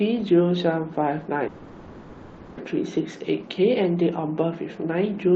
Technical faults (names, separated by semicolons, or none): call audio freeze